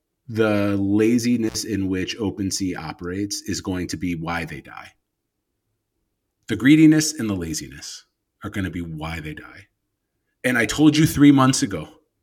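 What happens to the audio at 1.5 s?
The speech drops out with crackle at both edges from 1.48 to 1.55 s, just before "in which": an intermittent contact, a loose connection opening for about 59 ms.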